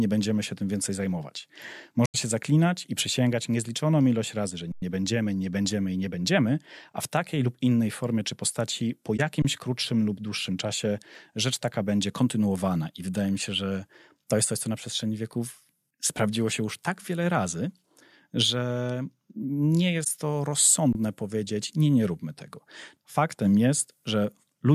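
At 2.06 s, between "się tym więcej zajmować" and "się zaklinać i przysięgać", a corrupt frame concealed leaves a soft-edged dip lasting 0.1 s. The decoder caught damaged AAC data and substituted muted or scrambled content. On a spectrogram this shows as a faded smear, not a bright click. At 4.72 s, after "niezliczoną ilość razy że", an underrun with held sample begins. The output ran dry, so the converter froze on its last value for 102 ms until "będziemy nie będziemy i" continued. In the waveform this is a flat line offset from zero. Because playback resumes exactly where it stopped, the sound simply halts and restarts with only a faint edge. Further concealed frames blur the sound at 9.17 s for 30 ms and at 20.02 s for 46 ms, each a brief muffled gap in the spectrogram. Shorter held-sample flats follow at 9.42 s for 26 ms, between "formie czy postaci po" and "krótszym lub dłuższym czasie", and at 20.93 s for 23 ms.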